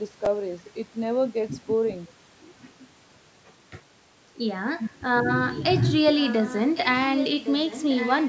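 From 0.2 to 0.3 s, 6.17 to 6.88 s and 7.09 s to the end, there's an echo leak: a faint copy of the speech about 1.1 s late, roughly 15 dB down, then nearer 10 dB in the last stretch. Likely a far-end speakerphone's echo canceller letting pickup through.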